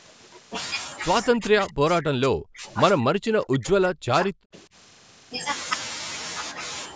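A speech clip with the voice getting suppressed twice, from 1.31 to 2.65 s and again from 2.99 to 4.75 s. In each stretch it is turned down, sinking something like 40 dB at its deepest, for roughly a second in the first and about a second and a half in the second. That's speech suppressed in double talk, likely an echo canceller mistaking the near talker for loudspeaker echo while the far side spoke. The call microphone processing caps things at 8 kHz.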